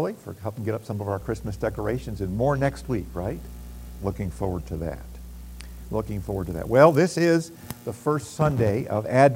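Mains hum runs from 1.20 s to 6.73 s: a steady low tone at 60 Hz sits under the sound for that whole stretch, roughly 15 dB below the main signal, so it is clearly audible rather than buried. The 60 Hz fundamental points to power-line energy leaking into the signal path, through either a ground loop between connected equipment or magnetic pickup from a nearby transformer. The hum starts and stops at those two times.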